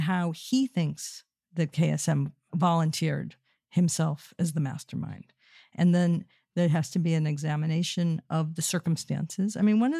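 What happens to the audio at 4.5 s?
Nothing goes wrong at 4.5 s; the speech carries on intact there, with no dropout, click, distortion or other fault at that moment.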